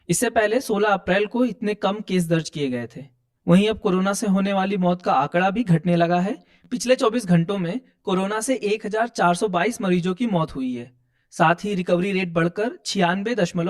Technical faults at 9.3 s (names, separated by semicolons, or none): channel delay (comb filtering)